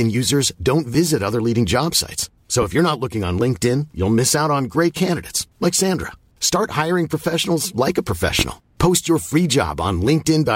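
At 2.62 to 2.66 s, just before "if you're not looking", a loud pop peaks roughly 10 dB above the speech, and at 8.39 to 8.43 s, after "hiring professionals like a", a stronger one reaches about 15 dB. Each is a single sharp thump, likely a voltage pulse from a plug, switch or static discharge, with the speech continuing beneath it.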